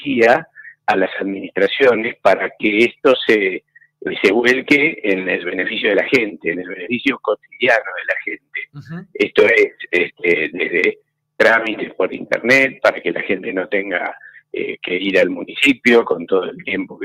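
No technical faults are audible.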